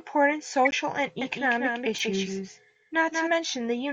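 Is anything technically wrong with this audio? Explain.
Yes, there are three kinds of fault.

MP3 compression runs through the whole clip. The speech sounds watery and swirly, with the top end cut off and metallic chirps on s sounds. That is likely low-bitrate MP3 encoding, around 64 kbps, starving weak frequency lines so they flicker between frames.

Corrupt frame decoded, at 0.65–0.73 s and again at 1.98–2.04 s. Damaged compressed frames were played anyway, so misread gains and codes scattered energy to wrong frequencies. The first event is a louder burst covering a few frames. The second is a quieter, shorter blip.

Doubled audio track, from 1.21 to 3.29 s. A second full-band copy of the speech trails about a fifth of a second behind, roughly 5 dB quieter, with no reverb tail. It starts and stops abruptly, likely from a slower second capture path mixed in.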